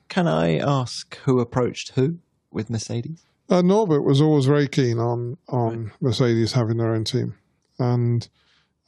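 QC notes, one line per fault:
No faults heard anywhere in the speech.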